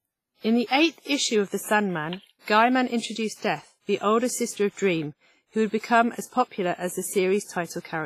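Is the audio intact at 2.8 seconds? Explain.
No, the audio at 2.8 seconds carries damage that runs through the whole clip, and it points to likely WMA compression at a low rate, around 24 kbps. A transform codec with long blocks smears its quantisation error over tens of milliseconds and drops weaker spectral lines, so the speech here sounds ringing and washy, with a hiss that swells and fades with the voice. Nothing is heard above 15.5 kHz.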